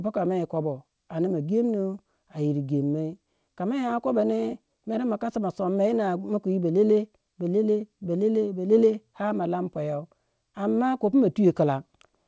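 Listening to this speech recording, which has come through a G.722 call path with nothing above 8 kHz, nothing stood out as a technical problem.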